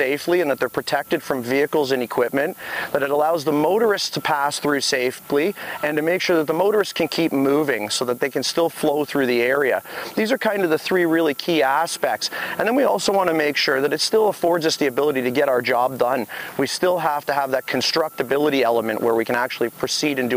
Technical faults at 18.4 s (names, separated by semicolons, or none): low bit depth with noise shaping